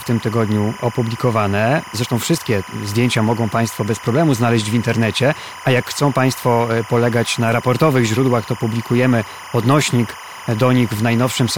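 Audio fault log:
Throughout: timecode bleed. Linear timecode at 25 frames per second is leaking into the speech from an adjacent track or cable, roughly 20 dB down. Its biphase square wave flips between tones near 1 and 2 kHz, producing a constant chirping warble underneath.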